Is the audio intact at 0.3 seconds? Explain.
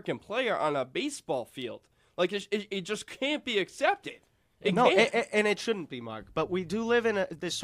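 Yes, the audio is intact at 0.3 seconds, with no fault audible at that moment.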